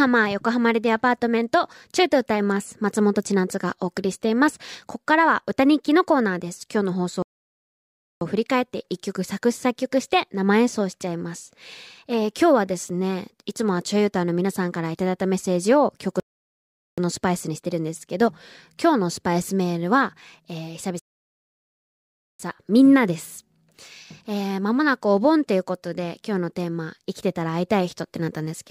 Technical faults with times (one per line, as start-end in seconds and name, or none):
7.22-8.21 rebuffering stall
16.20-16.98 rebuffering stall
20.99-22.39 rebuffering stall